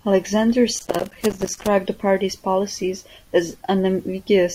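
An irregular burst of crackle and scratching runs from 0.79 to 1.68 s, just before "the party's policies". This is loose connector crackle: a worn or dirty contact repeatedly making and breaking, chopping the speech.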